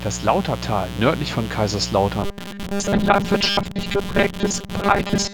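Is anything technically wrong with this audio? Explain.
Yes, the speech has two faults. A mains buzz runs throughout, and from 2.23 s to the end it also turns robotic.

The mains buzz sits only about 10 dB below the speech for the whole clip. It is a raspy 60 Hz buzz whose harmonics reach well into the kilohertz range, from switching spikes getting into the path twice per mains cycle. That spread of harmonics separates it from a smooth, pure hum.

From 2.23 s onward the speech becomes a rigid, metallic buzz locked at 200 Hz. It still roughly follows the words. The likely cause is robotic sound from repeated short buffers, with a chunk of about 5 ms replayed for most of the time. Unlike the mains buzz, its pitch is not tied to mains harmonics.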